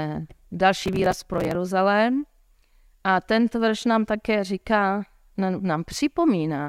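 From 0.83 to 1.55 s the speech is overrun by processor overload crackle: the system kept missing its deadlines for very short audio buffers, around 3 ms each, and each late buffer was simply skipped. Dozens of these tiny hard-edged gaps in a row produce a gritty, tearing crackle riding on the speech. Unlike a single dropout or a click, it is a dense cluster of clicks that persists for most of a second and then stops cleanly.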